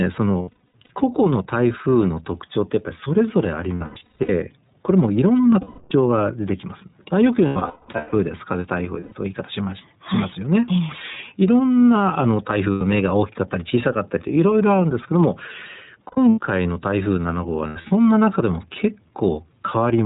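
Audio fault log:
throughout, gain pumping: The background level rises in every pause and drops by about 5 dB as each loud syllable arrives, so quiet and loud passages sit unnaturally close together and the whole track sounds squashed and breathing. The likely cause is input gain set far too high, with a fast limiter clamping it on every peak. On a waveform the envelope looks flattened, with the noise floor bulging between phrases; a spectrogram shows the background band brightening in gaps and dimming under speech.
throughout, iLBC codec: The speech is intelligible but slightly rough and synthetic, with a thin, boxed-in tone, because this narrowband VoIP codec rebuilds each frame's excitation independently and passes nothing above 4 kHz. The damage is plainly audible, and the character fits iLBC's 13.33 kbps mode with 30 ms frames. A spectrogram shows a hard ceiling at 4 kHz with empty space above it, and the harmonics below look slightly smeared and grainy from frame to frame rather than continuous.
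0.42–0.91 s, 3.76–4.30 s, 5.61–5.93 s, 7.47–8.14 s, 8.99–9.13 s, 12.71–12.82 s, 16.07–16.39 s, 17.67–17.91 s, lost iLBC frames: Each gap turns into a held, faintly buzzy or breathy vowel where the decoder repeats the last pitch cycle mixed with noise. Missing audio ranges from 90 ms to 540 ms per event, often broken into scattered runs of up to roughly 200 ms. Because each frame stands alone, normal speech returns almost immediately. Spectrograms show frozen, flat harmonic stripes, and waveforms show a repeating periodic pattern across each gap.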